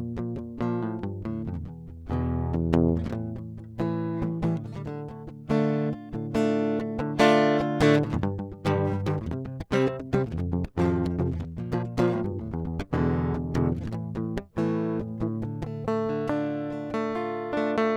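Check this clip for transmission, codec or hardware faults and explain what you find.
One fault here, a time-stretched section. From 8.26 to 12.98 s the music jumps to 1.58 times speed at the same pitch, sounding rushed, likely from software dropping short slices.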